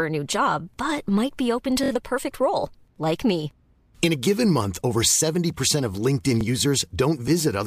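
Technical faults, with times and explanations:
1.83 to 1.90 s, repeated buffer: a 23 ms piece plays four times in a row as new audio arrived late, giving a short hard-edged stutter, fitting a 1024-sample buffer.
6.41 to 6.43 s, repeated buffer: the same 23 ms length repeats once more, heard as a brief click-like double at the join, with essentially no audio lost.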